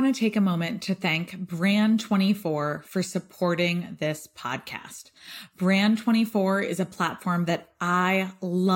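No technical faults are audible.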